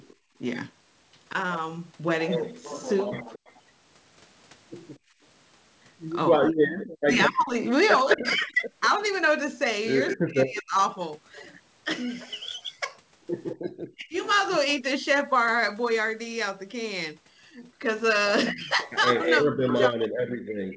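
At 0.11 to 0.16 s a faint delayed copy of the speech, about 35 dB down and 230 ms late, appears. This is an echo leak, likely from a far-end loudspeaker whose echo canceller let part of the microphone pickup through. Right after it, from 0.16 to 0.34 s, the room background is gated by the echo canceller, dipping by up to about 19 dB for roughly a fifth of a second before recovering. The same leak returns far louder from 3.35 to 10.17 s, only about 5 dB below the speech, trailing it by 230 ms. Within that stretch, at 4.99 to 5.21 s, the background gates again, dropping up to about 23 dB. From 6.37 to 10.76 s the speech is suppressed in double talk. With both sides active, the canceller likely clamps the near talker together with the echo, so roughly two seconds of speech dip by as much as about 40 dB or break up. A short echo burst at 13.51 to 13.56 s, 207 ms late and about 15 dB down, is followed by a brief suppression dip of about 30 dB at 13.98 to 14.14 s. 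From 18.53 s to the end the speech is again suppressed in double talk by up to about 40 dB. Within that span, from 19.15 to 19.89 s, the 207 ms echo is as loud as the speech itself.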